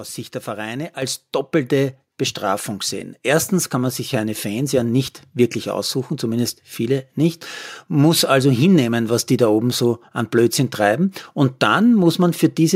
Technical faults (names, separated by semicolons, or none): microphone volume stepped up